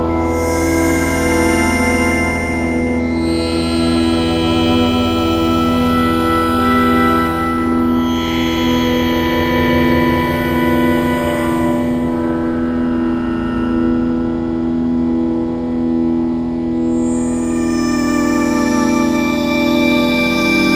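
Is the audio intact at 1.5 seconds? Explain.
Yes, at 1.5 seconds the audio is intact, with no dropout, click, distortion or other fault audible at that moment.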